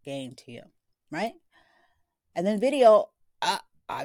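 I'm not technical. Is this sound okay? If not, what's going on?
No. At 2.86 s there is a brief hard clipping. The speech peak is slightly too loud, so its top is cut flat, causing a tiny crackle.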